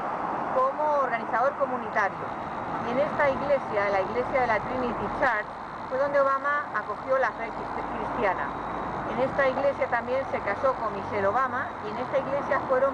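Nothing is technically wrong with this audio; no faults can be heard anywhere in it.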